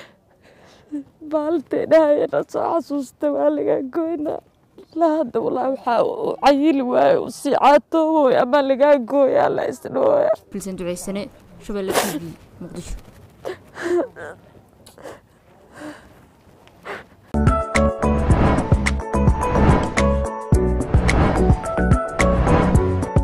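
No dropouts, clicks, distortion or other faults can be heard anywhere in the audio.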